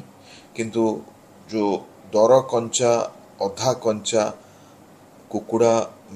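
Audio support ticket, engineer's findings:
No technical faults found in the signal; the audio path shows no audible defect at any point.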